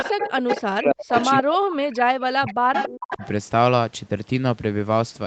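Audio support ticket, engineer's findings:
Echo leak: delayed duplicate of the speech trailing the original by 280 ms, 0.00–0.61 s, 1.11–1.25 s, 1.91–1.96 s, 2.73–3.28 s. Loud at first and last (about 5 dB under speech), faint at 1.91 s (about 30 dB under). Likely far-end AEC leaving speakerphone pickup uncancelled.

Speech suppressed in double talk: far-end speech dips and chops out while the echo overlaps, 0.46–1.16 s and 1.40–2.71 s, dropping very deep (around 40 dB). Brief, shallower dip 3.15–3.23 s. Likely AEC suppressor attenuating both talker and echo when it can't separate them.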